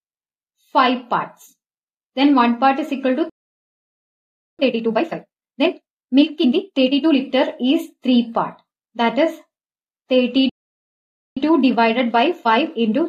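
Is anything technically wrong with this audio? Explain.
Yes. At 3.29 s the sound halts for about 1.3 s until 4.59 s, and again at 10.49 s for about 0.87 s until 11.37 s. This is a playback stall, most likely the player running short of data or its thread being blocked. Unlike a brief dropout, it is a noticeable mid-flow silence.

After each stall the player trims its backlog with time-compressed catch-up, cutting out small pieces and cross-fading them. From 4.59 s to 7.17 s the sound runs at about 1.5x speed, and from 11.37 s to the end at about 1.15x. Pitch stays normal, which is what separates this from a simple speed-up that would raise the pitch.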